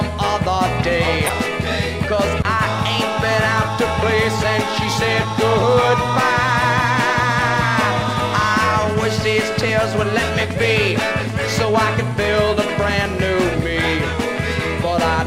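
Two brief bursts of wrong-frequency energy, at 1.27 to 1.30 s and 2.42 to 2.45 s, mark a corrupt frame decoded, where damaged compressed data was played back anyway. Each burst peaks around -5 dBFS. Unlike a click or dropout, each burst lasts a codec frame or a few.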